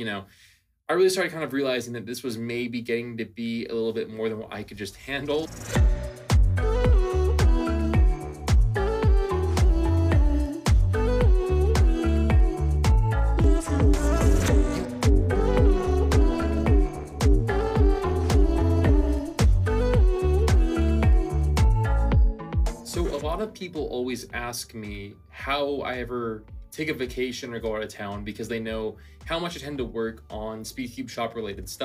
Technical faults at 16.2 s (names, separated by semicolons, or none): overlap-add ripple